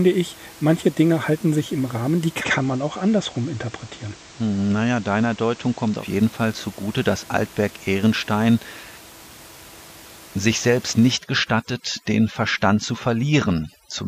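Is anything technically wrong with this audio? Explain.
Yes, there are two faults in this speech recording.

From 2.35 to 6.06 s there is digital radio blending to analogue. The receiver lost its digital stream and cross-faded over about 105 ms to the station's FM broadcast, then returned. During that stretch the level drops about 2 dB and hiss rises to roughly 25 dB below the speech. On a spectrogram a raised noise floor appears across the band.

From 11.12 s to the end there is overdone noise removal. A noise reducer set too aggressively is muting individual frequency bands whenever they sink near its noise estimate, taking the quieter parts of the speech with them. The room noise, about 22 dB below the speech before this point, collapses to near silence dotted with twinkling artefacts. A spectrogram shows scattered isolated specks where a smooth noise floor was.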